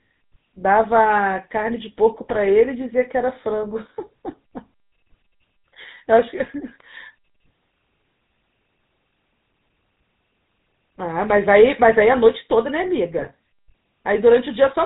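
Right from the start the whole clip carries the GSM full-rate codec sound. The speech has that buzzy, gravelly edge you get when the vocal tract is modelled and driven by a sparse, regularly spaced pulse train rather than the real excitation. Nothing comes through above 4 kHz, so it's dull and boxy, and the damage is plainly audible. The character fits the old 13 kbps full-rate coder.

On top of that there are three bursts of GSM bit errors, at 2.3 to 2.37 s, 6.4 to 6.47 s and 13.18 to 13.27 s. Each lasts under a tenth of a second, which fits three or four corrupted 20 ms frames. Flipped bits have reached the decoder's filter, pitch or gain values, so for those moments the spectrum warps or the level jumps. You hear brief squawks, pops and gargling, and the last burst is slightly longer, hitting four frames at a higher error rate.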